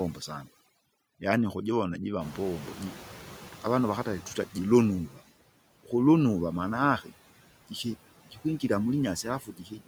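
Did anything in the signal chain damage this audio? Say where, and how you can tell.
Yes, and it's all in the call-processing stage, specifically the noise suppression. The clearest sign is overdone noise removal running through the whole clip. Bands that sit near the suppressor's noise estimate get pushed almost to nothing, so the background collapses into near silence with little twinkling specks. The quieter parts of the speech go down with those bands. That's a suppressor set far too aggressive for this material.

On top of that you get the ordinary noise suppressor artifacts, also throughout. The suppressor takes about 16 dB off the steady noise frame by frame, so the noise drops in the gaps and swells back up under the speech. Because the gain keeps switching between the gaps and the speech, the residue never sounds like plain room tone.

Around 2.0 s the room noise itself jumps by about 21 dB. 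That's genuine background in the room, not a fault, and it settles roughly 19 dB below the speech. The fault is how the suppressor handles it, which is a clear case of the noise suppressor catching up. Right after "yaani ukujivona jiva", from 2.2 to 5.0 s, the louder noise comes through with only about 10 dB of reduction. It then sinks gradually as the estimate adapts over about 2.8 s.

Finally there's speech cut by the noise suppressor in three places. At 5.09 to 5.19 s, a tenth of a second is dipped by up to about 7 dB. From 8.25 to 8.63 s, around a fifth of a second drops by up to about 15 dB. From 9.23 s to the end, a fair stretch sinks by up to about 18 dB. In each spot the speech sounds swallowed, because the suppressor mistook it for background and turned it down along with the noise.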